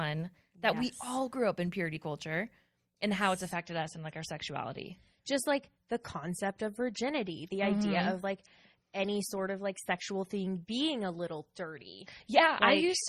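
Speech that switches abruptly at 3.5 s, right after "culture and how it's", to an adaptive stream at a lower bitrate until the end. There is nothing above 14.4 kHz, consistent with MP3 dropping from 128 to 32 kbit/s. Unlike a dropout, there is no gap.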